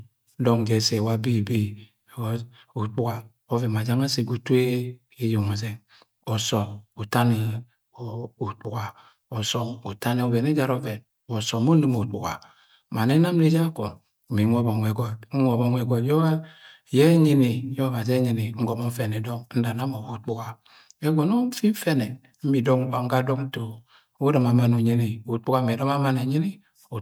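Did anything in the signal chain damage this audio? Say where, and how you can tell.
No, nothing in the chain has audibly damaged this speech recording at any stage from capture to playback.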